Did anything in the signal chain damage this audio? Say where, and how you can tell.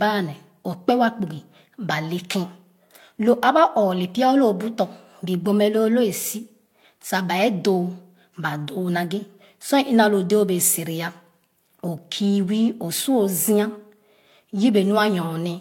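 Yes, at the codec stage: two kinds of compression artefact stack throughout beneath a 17.3 kHz ceiling, pointing to Vorbis then HE-AAC and likely transcoding between lossy codecs.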